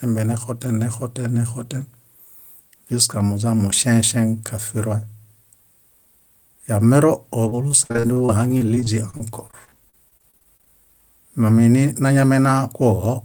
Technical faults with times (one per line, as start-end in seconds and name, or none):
7.49-10.68 repeated packet loss (robotic sound)
12.02-13.06 jitter buffer speed-up